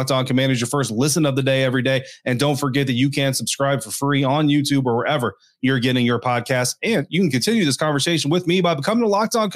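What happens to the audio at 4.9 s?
Nothing goes wrong at 4.9 s; the speech passes through that moment intact, with no dropout, click or distortion.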